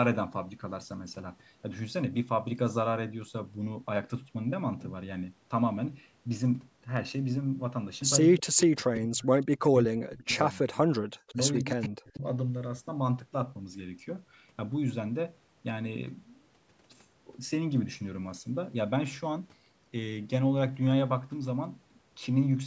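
From 8.26 to 8.59 s, and again from 8.76 to 10.84 s, the speech sinks and breaks into fragments, falling by as much as about 40 dB so that roughly 1.5 s of the longer stretch is nearly gone. This is speech suppressed in double talk. The likely cause is the far side talking over it: the echo canceller could not tell this talker from returning loudspeaker sound and pulled everything down. A smaller dip of about 10 dB follows briefly at 11.32 to 11.39 s, and a deeper one of around 40 dB runs from 11.64 to 12.24 s.

Woven through these moments, a faint delayed copy of the speech surfaces in short scraps: at 9.66 s, about 20 dB down and trailing by 189 ms; at 11.27 to 11.34 s, about 30 dB down and 166 ms behind; and from 11.54 to 11.88 s, about 20 dB down at the same 166 ms lag. This is echo leak, likely from a loudspeaker on the other end whose canceller let part of the returning signal slip back into the call. 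The bass roll-off from call microphone processing is normal.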